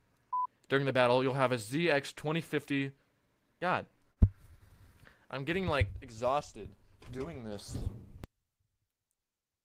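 A short stall from a late packet hits at 4.11 to 4.20 s. The packet arrived late, the jitter buffer ran dry, and the receiver held the last sound for about 54 ms before resuming where it left off. Nothing is lost, but the sound hangs briefly and everything after runs 54 ms later. From 8.24 s to the end, the level drops by about 28 dB and the sound turns faint. The likely cause is one channel inverted in polarity, so the shared, centred content cancels when the channels are summed to mono, leaving only their small differences.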